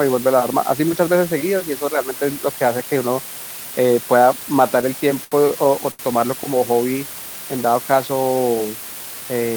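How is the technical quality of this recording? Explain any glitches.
The recording has two clear technical faults: constant hiss from a coarse bit depth, and two brief stalls where the speech hangs.

Low bit depth with dither runs throughout. The speech uses only 5 bits, and dither turns the rounding error into an even hiss about 15 dB below the speech. Because of the dither, it stays smooth rather than becoming gritty distortion that follows the speech.

A short stall from a late packet occurs at 5.24–5.35 s and again at 5.92–6.02 s. Each time, the receiver held the last sound for about 73 ms and then 75 ms while waiting for the packet, producing a drawn-out hang with a slight buzz or dip. Unlike a dropout, nothing is missing, and the speech resumes exactly where it stopped.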